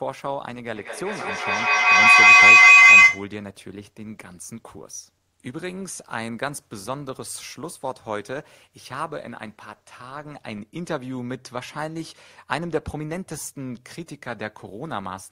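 From 0.73 s to 3.36 s there's a proper feedback howl. Two devices in the same room are on the call, so the loop from mic to speaker and back keeps adding level on each pass instead of dying away. It narrows to a shrill tone somewhere around 3 kHz, pulsing about every fifth of a second with the loop delay, and peaks at about 19 dB above the speech before it breaks off.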